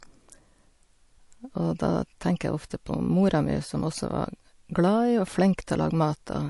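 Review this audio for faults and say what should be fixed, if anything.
Across the whole speech clip, plainly audible coding damage and a hard treble cut-off at 11.3 kHz point to likely MP3 compression at a low bitrate, fitting about 48 kbps. Starved of bits, the encoder discards weak frequency lines frame by frame, leaving watery, swirling artefacts. To prevent this, keep the source uncompressed or encode at a substantially higher bitrate.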